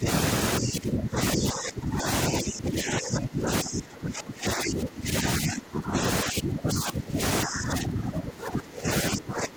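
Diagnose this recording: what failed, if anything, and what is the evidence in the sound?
Speech suppressed in double talk, in call processing: the talker gets ducked by roughly 15 to 20 dB at 0.0–0.07, 0.59–2.07, 2.29–6.01, 6.23–7.21, 7.45–8.89 and 9.1–9.56 s. Likely the echo canceller saw both ends talking at once and clamped down on the near side too.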